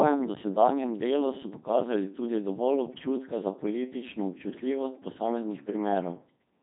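Speech passed through a Codec 2 vocoder throughout, rebuilt from sine waves into a robotic, buzzy voice, with nothing above 3.8 kHz and heavy damage that fits its 2.4 kbit/s mode.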